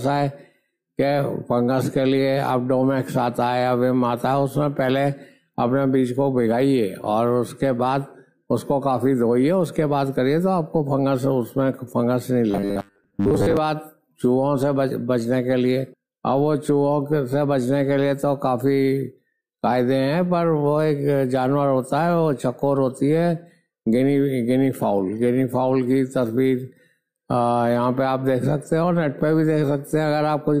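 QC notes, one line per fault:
12.51–13.57 s, robotic sound from repeated short buffers: the sound turns into a rigid, metallic buzz pitched at 100 Hz that only loosely tracks the underlying material, then clears. The likely cause is new audio arriving too late, so the playback side fills the gaps by looping a very short stretch, about 10 ms given the 100 Hz buzz, while the real audio is skipped. For most of this stretch, roughly 70% of it, repeats stand in for real audio.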